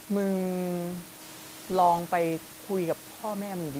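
Nothing goes wrong anywhere in the recording: the speech comes through with just a bed of room noise sitting about 19 dB beneath it, which is simply the space the microphone was in.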